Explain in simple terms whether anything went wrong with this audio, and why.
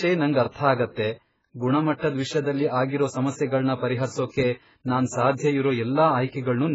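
Heavy AAC compression runs throughout: nothing remains above 7.6 kHz, so the speech sounds dull and smeared, likely from a very low-bitrate encode.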